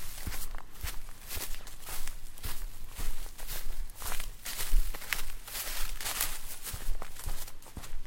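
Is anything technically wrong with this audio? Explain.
No, nothing here stands out as technically wrong; it's just everyday sound coming through as it should, with nothing glitchy or odd to point to.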